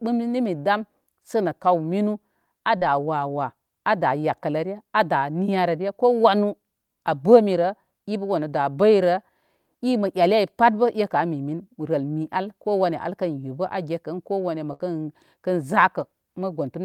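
At 2.77 to 2.83 s, about 40 ms of speech arrived too late and was concealed by extending the previous sound, a short concealed packet loss heard as a brief smear. At 14.73 to 14.81 s, a burst of packet loss drops 60 ms; the receiver fills 62 ms with a fading continuation, and the speech resumes further on.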